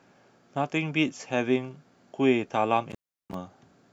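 From 2.90 to 3.34 s, an intermittent contact opens the line for 350 ms. Unlike a clean digital dropout, the speech cuts with crackle at both edges and faint hiss between.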